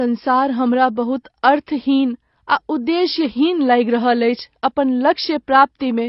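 Throughout the speech, nothing is present above 5.5 kHz, leaving it dull, with smeared, warbling sibilants. This is likely AAC compression: low-bitrate AAC-LC, around 24 kbps, lowers its cut-off and quantises the remaining bands coarsely, so detail is lost.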